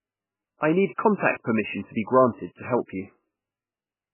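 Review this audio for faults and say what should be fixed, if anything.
MP3 compression, throughout: nothing remains above 3 kHz, and the speech sounds heavily watery and swirly, with smeared onsets. This is likely an MP3 encoder starved of bits, which fits a bitrate near 8 kbps, cutting treble and zeroing weak frequency lines frame by frame. To prevent it, keep an uncompressed or high-bitrate master and encode MP3 at a far higher bitrate.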